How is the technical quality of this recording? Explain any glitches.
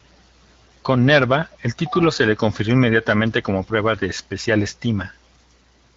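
No glitches are audible; the speech carries the light coding of AMR wideband (HD Voice) at 12.65 kbit/s, which keeps it clear up to the 7 kHz HD Voice limit.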